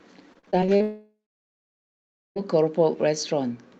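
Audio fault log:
0.33–0.82 s, repeated packet loss (robotic sound): seven short holes, the longest about 40 ms, are each patched by stretching the preceding sound, so roughly a third of this half-second is synthetic fill. The rapid patch-and-resume cycle gives a choppy texture, unlike one continuous gap.
0.82–2.38 s, long network dropout: the sound smears into a fading buzz or hiss, then leaves about 1.2 s of silence before resuming, with the missing stretch never played. A single sustained outage is the likely cause, distinct from the preceding rapid, brief patching.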